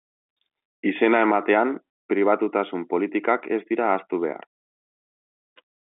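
No technical faults can be heard in this speech.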